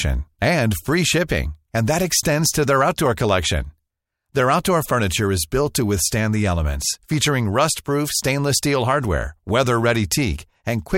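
No technical fault can be heard anywhere in this recording, and the signal holds steady throughout without any dropout, distortion or interruption.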